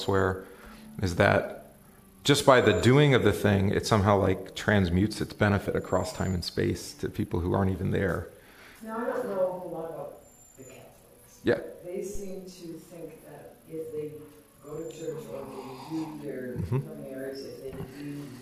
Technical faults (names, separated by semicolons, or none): phantom power thump